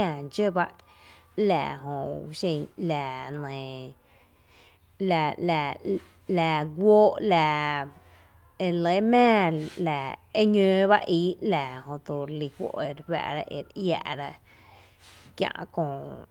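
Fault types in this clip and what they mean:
No technical fault can be heard in the speech recording. There is nothing to list under any fault type.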